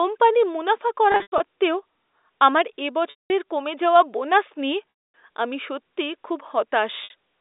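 Packet loss with pitch repetition occurs four times. Each time, the receiver fills the missing stretch by repeating the last pitch period and fading it out. From 1.12 to 1.40 s, about 180 ms is lost in scattered bursts, the longest lasting 100 ms. There is a 200 ms gap at 3.10 to 3.30 s, a longer loss beginning at 5.10 s, and a 60 ms gap at 7.04 to 7.10 s. The shorter gaps sound like a briefly held, buzzy tone. The longer ones fade toward silence before the sound cross-fades back in, all within the narrow 300 Hz to 3.7 kHz band of the G.711 line.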